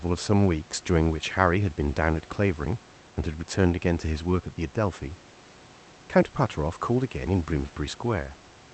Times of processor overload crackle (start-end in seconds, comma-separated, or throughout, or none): none